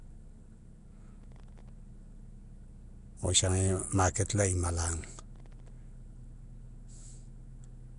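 Right from the start the speech has a rough, hissy halo, a watery smear and nothing above 10.6 kHz, likely Nellymoser compression at around 44 kbps. From 1.22 to 1.69 s and again from 5.35 to 5.70 s comes processor overload crackle: in each burst roughly twenty sub-millisecond buffers missed deadlines, each leaving a hard-edged silent gap, so it tears gritty.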